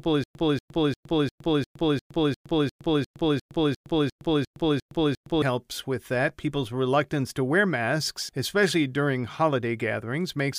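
From the start to about 5.42 s there's a stutter with silent gaps: one 237 ms scrap of speech repeats 15 times, each followed by 114 ms of dead silence, pulsing every 351 ms. It's likely a stalled stream replaying its last fragment on each retry, and the speech that belonged there is lost.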